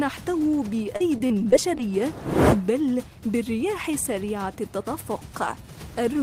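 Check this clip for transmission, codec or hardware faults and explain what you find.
One transmission fault is present. From 0.96 to 1.80 s there is repeated packet loss (robotic sound): six short dropouts, the longest 37 ms, totalling about 100 ms. The receiver fills each hole by extending the preceding audio, roughly 70 ms of it, so the stretch sounds choppy, with fragments missing.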